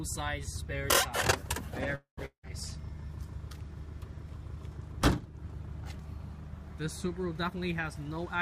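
Call audio freeze, 1.95 to 2.19 s: the last sound stretches into a fading buzz and then about 130 ms of silence before the audio resumes where it stopped. The likely cause is held-up packets draining the jitter buffer, inserting a 220 ms gap with nothing lost.

Long network dropout, 2.25 to 2.45 s: again the sound trails off into a fading buzz and about 90 ms of silence, but here the audio returns further on, with about 180 ms skipped. This likely comes from packets that never arrived, so that stretch was never played.

Jitter buffer speed-up, 7.43 to 8.36 s: the audio runs hurried, at about 113% speed with unchanged pitch. The buffer held too much audio, so the receiver trimmed many short pitch-period pieces, roughly 150 ms in total, to cut the delay.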